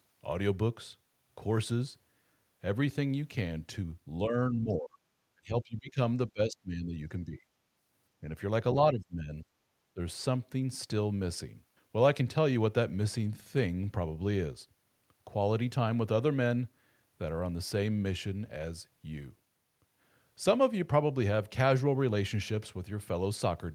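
Speech suppressed in double talk, at 4.25 to 4.35, 4.51 to 5.01, 5.35 to 5.98, 6.28 to 7.41, 8.92 to 9.46 and 9.94 to 10.0 s: the speech dips by roughly 5 to 30 dB in pieces. This is likely an echo canceller that could not separate this talker from the loudspeaker echo during overlapping talk and turned both down.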